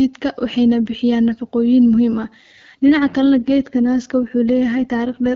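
An AMR rate drop begins at 2.18 s in this speech clip and lasts to the end. From that point the speech turns rougher and more synthetic, with no gap and no loss of bandwidth. The quality change fits the network pushing the AMR-WB codec down from 12.65 to 8.85 kbit/s, spending the freed bits on error protection for a weak radio link. Before the switch, the HD Voice coding sounds clear with only light codec damage.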